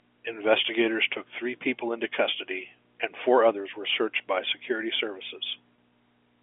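At 2.83 s and 5.76 to 5.78 s, packet loss with pitch repetition fills 10 ms and 20 ms gaps by repeating the last pitch period. The result is a brief buzzy hold rather than a silent dropout.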